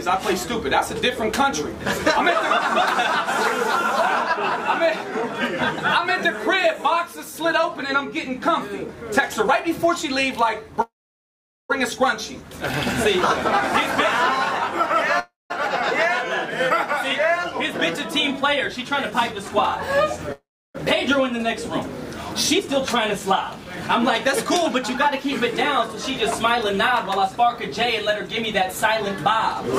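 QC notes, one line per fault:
10.81–11.71 s, 15.19–15.52 s and 20.32–20.76 s, call audio freeze: the sound stalls, with the last moment stretched into a brief fading buzz and then silence lasting about 0.8 s, 0.18 s and 0.32 s. The likely cause is late packets draining the jitter buffer. Unlike a dropout, nothing is lost. The sound resumes exactly where it stopped, so each pause adds delay (0.88 s, 0.31 s and 0.42 s).
17.52–20.18 s and 22.58–29.64 s, jitter buffer speed-up: the audio plays at 103% speed while the pitch stays unchanged. This is how the receiver works off built-up delay, cutting tiny pitch-period slices again and again until roughly a tenth of a second, and then about 0.3 s, is removed. Resampling would raise the pitch along with the tempo. Here only the pace changes.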